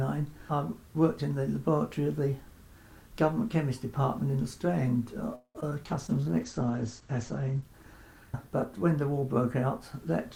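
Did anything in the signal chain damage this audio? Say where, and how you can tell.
Yes. At 5.35 s the network stalls and the sound hangs for about 0.19 s, trailing off with roughly 60 ms of silence. That's likely a call audio freeze: the jitter buffer ran dry, then playback resumed where it stopped.

Right after, at 5.61 s and 5.70 s, there are two quick smears. That's short concealed packet loss: about 40 ms went missing each time, and the decoder papered over it with extrapolated sound.

From 5.84 s to the end the codec degrades into a call bitrate drop, from 128 to 11 kbps. The top end collapses from 20 kHz to 8 kHz, so it sounds muffled and watery.

Between 6.08 and 6.77 s the jitter buffer slows down, playing at about 91% speed by repeating pitch periods. That adds 70 ms, which you hear as drawn-out sound at unchanged pitch.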